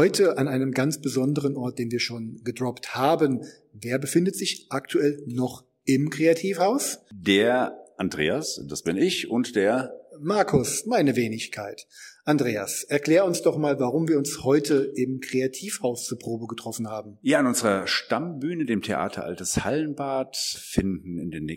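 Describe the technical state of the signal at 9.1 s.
At 9.1 s the signal is intact, with no audible dropout, distortion, glitch or other technical fault at that point.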